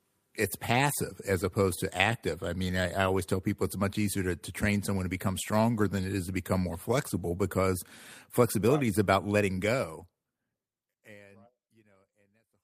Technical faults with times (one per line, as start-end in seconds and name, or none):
none